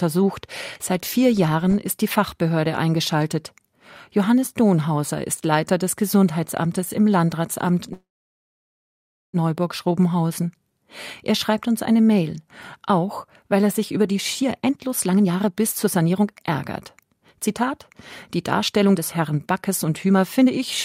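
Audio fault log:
7.93–9.36 s, call audio freeze: the speech stops, a brief fading buzz or hiss carries the last sound, then about 1.3 s of silence before it resumes exactly where it left off. Likely cause: delayed packets emptied the jitter buffer, inserting a 1.4 s gap with nothing lost.
14.42–16.51 s, 17.00–17.21 s, 18.38–20.62 s, jitter buffer speed-up: the speech sounds hurried at unchanged pitch, running at 125%, 148% and 117% speed. The buffer held too much audio and trimmed many short pitch-period pieces, removing roughly half a second, a tenth of a second and 0.4 s.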